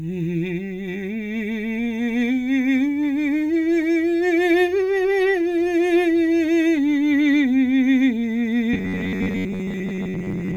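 From 8.73 s to the end at 10.57 s, the music collapses into robotic sound from repeated short buffers: a rigid, metallic buzz pitched at 93.8 Hz that only loosely tracks the underlying music. The likely cause is audio arriving too slowly, so roughly 70% of the time is filled by looping the last chunk of about 10.7 ms. A spectrogram shows a flat comb of harmonics spaced 93.8 Hz apart, and the waveform shows near-identical segments recurring every 10.7 ms.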